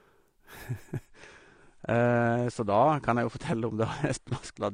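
At 1.06 s the speech suddenly dulls and turns swirly, with nothing above 9.8 kHz. That fits an adaptive stream at a lower bitrate, likely about 32 kbit/s, lasting to the end.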